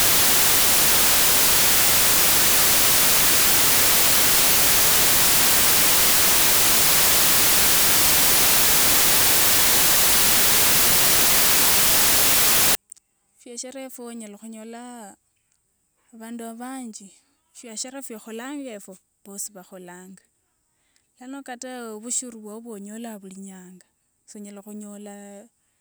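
Speech, with its first 12.75 s, from 0.0 s onward, buried under loud white hiss caused by samples built from the wrong bytes: the decoder assembles each sample from misaligned or byte-swapped data, so the rapidly fluctuating low-order bits land in the most significant position. Unlike added background noise, this hiss does not sit beneath the speech; it replaces the samples themselves.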